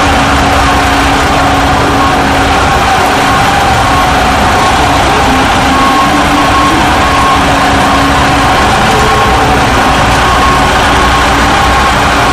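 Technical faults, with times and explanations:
Throughout, hard clipping: the level's driven about 13 dB past what the chain can pass, so nearly a third of the waveform gets flattened into harsh fuzz.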